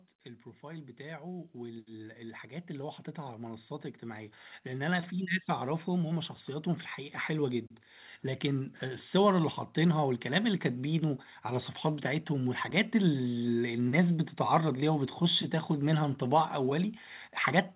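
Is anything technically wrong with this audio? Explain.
Yes. From 0.6 s to 7.59 s there is automatic gain rising. The gain control judged the input too quiet and raised its gain slowly, by about 14 dB in total, so the speech and the background noise swell together rather than staying at a steady level. On a waveform the envelope widens steadily across those seven seconds. On a spectrogram the whole band, including the noise floor between phrases, brightens gradually. The sound has no energy above 4 kHz, which fits a narrowband telephone codec on the call path.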